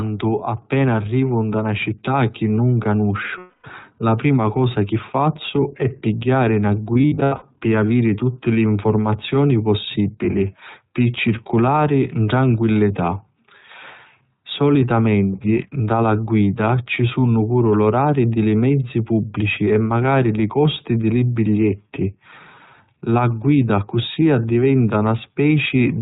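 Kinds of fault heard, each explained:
iLBC codec: narrowband VoIP coding cuts everything above 4 kHz, so the speech sounds thin, a bit rough and synthetic, consistent with the 15.2 kbps, 20 ms mode.
lost iLBC frames: dropped packets get patched with a repeated, noisy pitch cycle, heard as a held buzzy vowel before "la prima cosa chi" and around 6.9–7.4 s.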